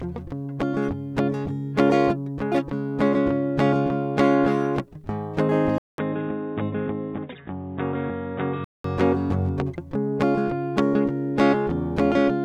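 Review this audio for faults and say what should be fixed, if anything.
At 5.78 s, after a 200 ms silence, the music turns dull and about 5 dB quieter. Nothing passes above 3.8 kHz, and new background noise appears. It clears at 8.84 s. This is likely an input switched to a poorer device. Lock the recording input so the system cannot change devices mid-take.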